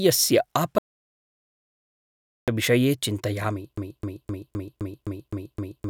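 At 0.78 s the speech cuts to dead silence with no room tone until 2.48 s, losing about 1.7 s. This audio dropout to silence likely comes from the input being lost while silence kept being written.

From 3.78 s to the end, a 0.26 s fragment repeats back to back eight times. This broken-record loop is likely a stalled stream resending its last fragment while the real audio is lost.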